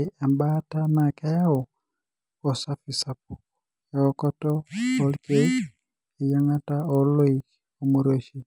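A sample-rate converter restarted on every 50 ms block, likely going from 24 kHz to 48 kHz, leaves small edge errors that tick at 20 Hz throughout this speech, audible only while sound is present.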